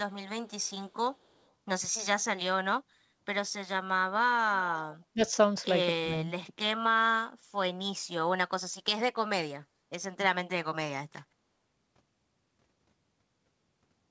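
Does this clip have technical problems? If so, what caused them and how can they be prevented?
Yes. From 0.48 to 0.71 s there is an echo leak: a faint delayed copy of the speech, about 240 ms late and around 40 dB below it, likely from a loudspeaker on the far end whose echo canceller let some of the pickup through. On a spectrogram it shows as a weak, smeared duplicate of the preceding harmonics; in the waveform it is barely visible above the floor. Using headphones or tuning the far end's echo canceller would prevent it.

The speech is suppressed in double talk at 5.14 to 5.22 s and again from 6.0 to 6.3 s. Level drops by about 20 dB, likely because an echo canceller confused the talker with the far end's echo and turned both down. The waveform shows sudden notches in the envelope, and the spectrogram shows bands that fade. A canceller with better double-talk detection, or a headset that removes the echo, would prevent this.

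Across the whole clip there is no energy above 8 kHz, which fits the wideband call codec on this path.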